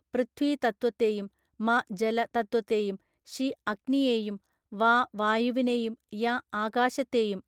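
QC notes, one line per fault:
No faults found in this recording.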